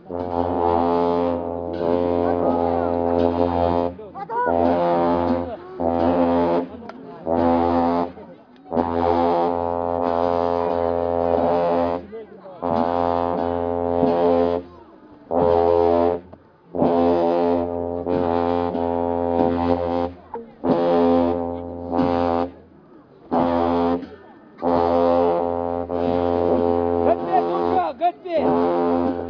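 Nothing in this recording of sounds stood out as a technical problem on listening.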